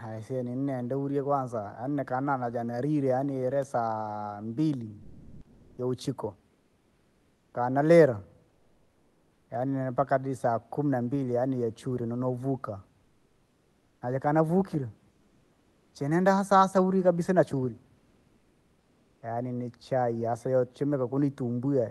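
Comfort noise in place of the background fills four pauses in this speech clip, at 5.05–5.77 s, 8.53–9.49 s (ending just before "yaani nempaka saa kumi"), 13.03–13.99 s (after "nambili yaani yachuri nonovuka") and 15.13–15.91 s (before "cheneenda hasa hasa uri"). In each gap the room background, about 40 to 44 dB below the loudest speech, gives way to a flat, textureless hiss. The first patch jumps about 14 dB louder, and the others sit within about 2 dB. This is likely Opus discontinuous transmission, with the receiver synthesising noise while the sender goes quiet.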